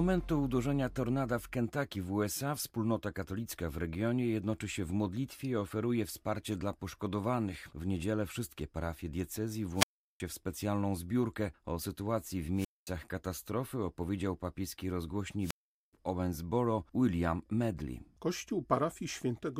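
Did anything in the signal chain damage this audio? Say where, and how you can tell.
Yes. The damage comes from the analogue radio link, before any conversion. It is a wireless microphone squelch dropout, heard three times. At 9.74–10.20 s, after "niedzielę wszystkie parafie diecezji", hiss rises and the speech mutes for 0.37 s. At 12.55–12.87 s, after "sytuacji w", the hole lasts 0.22 s. At 15.40–15.93 s, after "katastrofy opowiedział papieski", it lasts 0.42 s. Each time the FM signal fades, and the receiver's squelch cuts the output until it recovers.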